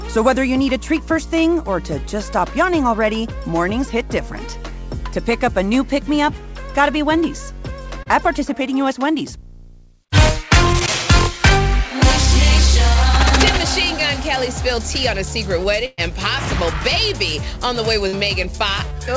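Short concealed packet loss at 8.03 to 8.09 s: about 30 ms of audio never arrived in time, so the receiver stretched the preceding sound across the hole for roughly 27 ms and blended back in. It comes across as a brief smear or wobble.

A burst of packet loss at 15.86 to 16.01 s drops about 120 ms. The last sound is carried on for about 119 ms and fades, ending in roughly 10 ms of silence before the audio resumes further along with that stretch gone. A shorter burst at 18.08 to 18.16 s loses about 60 ms, with about 50 ms concealed as a quick held-over tail before the jump forward. Through the call path the band stops at 8 kHz, which fits a wideband call codec such as G.722.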